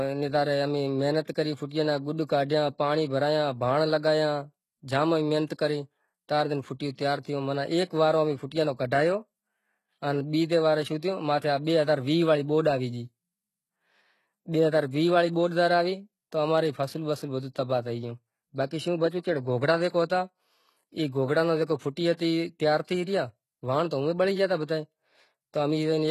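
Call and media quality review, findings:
Likely HE-AAC compression at a low bitrate, consistent with about 16 kbps, throughout the speech. Upper band replicated from lower bands rather than coded, so harmonics misalign above the crossover. S sounds gritty, metallic, lispy. Nothing above 12.3 kHz. Heavy damage.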